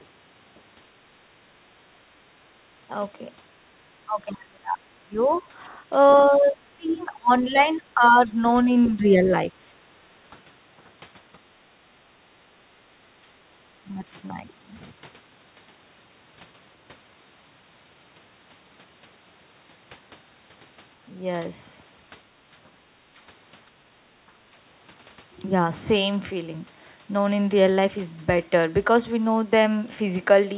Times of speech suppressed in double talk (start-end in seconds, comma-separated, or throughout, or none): 1.63-10.36, 13.87-14.05